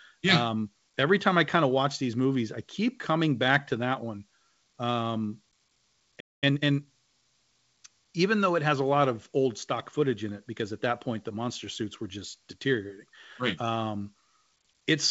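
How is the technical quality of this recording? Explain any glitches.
The recording has one glitch around the 6-second mark: a brief dropout followed by a rushed stretch of speech. Throughout, the speech has nothing above 8 kHz, which fits a call codec such as G.722 at 64 kbps.

Playback stall, 6.20 to 6.44 s: The player likely ran short of buffered data or had its processing thread held up, so it had nothing to send to the output. The speech breaks off mid-flow into about 0.22 s of silence, then resumes. The gap is long enough to hear as a hiccup in the delivery.

Time-compressed catch-up, 6.44 to 6.88 s: Having fallen behind during the stall, the player works off its backlog by cutting out small slices of audio and cross-fading the remaining pieces together. For this stretch the speech runs at roughly 1.5 times normal speed but keeps its pitch. It sounds hurried before settling back to its normal pace.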